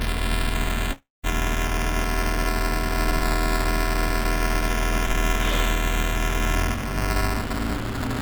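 Throughout the clip of everyday sounds, buffer tearing adds a robotic buzz at about 345 Hz, a rate that fits a 128-sample buffer. The writing and reading sides of the ring buffer have drifted so that they cross inside every period, leaving roughly a tenth of each buffer filled with audio from about 10 ms earlier. Each of these stale stretches has hard joins at both ends. The rattle rides on the sound and drops away wherever the signal is quiet. The band ends at 4 kHz, as expected from the G.711 mu-law call path.

From 0.92 to 1.26 s there is a call audio freeze. The last sound carries on as a fading buzz, then goes silent for about 200 ms of the 315 ms filled stretch. The likely cause is delayed packets draining the jitter buffer. When audio returns it picks up exactly where it stopped, so nothing is lost. The gap does push everything after it about 315 ms later.

From 7.02 s to the end at 8.21 s, a jitter buffer speed-up plays the audio at about 108% of normal speed. 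The receiver was holding more audio than its target delay, so it cut short pitch-period-sized pieces in quick succession, removing around 100 ms in total. Pitch stays unchanged, but events arrive sooner and the final second sounds hurried.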